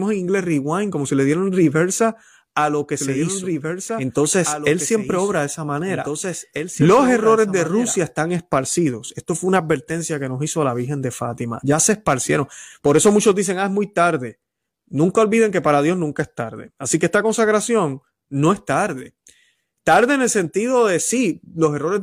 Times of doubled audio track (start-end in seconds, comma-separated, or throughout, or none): 3.00-7.96